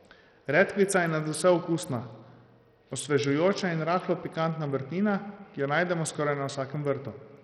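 Bluetooth SBC compression, throughout the speech, is the likely cause of the heavy damage: a coarse sub-band coder starved of bits, which fits a rate near 64 kbps, drops or flickers the treble and leaves gritty quantisation noise and aliasing riding on the voice.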